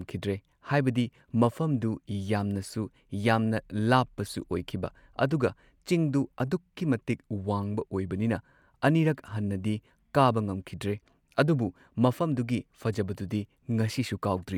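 No technical faults are audible.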